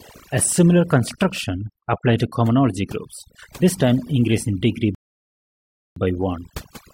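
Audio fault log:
throughout, overdone noise removal: bands near the noise estimate are cut deeply, leaving twinkling specks in near silence, unlike plain muffling.
4.95–5.96 s, rebuffering stall: playback falls silent for 1.02 s, then resumes exactly where it stopped, so time is added without losing audio, unlike a dropout.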